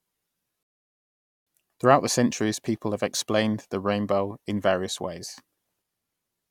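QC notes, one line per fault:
0.63 to 1.47 s, rebuffering stall: the speech drops to dead silence for about 0.84 s, then picks up exactly where it left off. The player ran dry of downloaded audio and waited for more, so nothing's missing, just time added.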